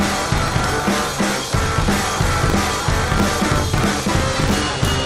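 Buffer tearing runs throughout: a rattling buzz at 50 Hz, present only with signal, as a small slice of each period replays audio roughly 40 ms stale.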